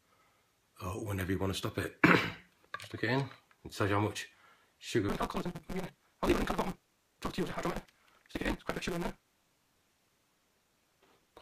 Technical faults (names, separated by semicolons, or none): block size mismatch (truncated)